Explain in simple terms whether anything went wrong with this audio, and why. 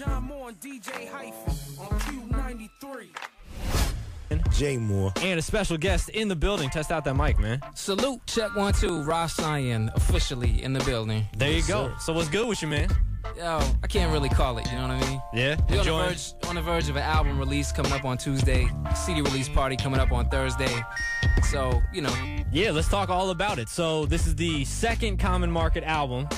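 Two bursts of processor overload crackle, from 8.79 to 9.11 s and from 12.34 to 12.80 s. The computer fell behind, and about ten tiny chunks of sound, each a millisecond or two long, were skipped in quick succession. Unlike one isolated click or dropout, this gives a short gritty patch that then clears.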